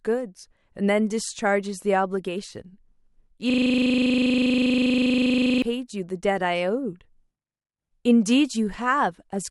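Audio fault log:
3.50–5.62 s: system hang loop. The same 40 ms piece of speech repeats 53 times back to back. The playback side stalled while the sound hardware kept replaying one ring buffer. Repeating at 25 Hz, it sounds like a coarse, rattling buzz.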